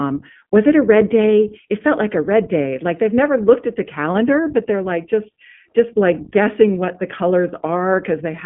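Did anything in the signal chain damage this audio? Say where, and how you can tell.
Yes, at the codec stage. Throughout, the speech sits within about 150 Hz to 3.4 kHz and sounds plainly rough and synthetic. That points to the iLBC codec, which codes each frame's excitation independently, and fits 20 ms frames at 15.2 kbps. A plain telephone band filter would narrow the sound without that roughness.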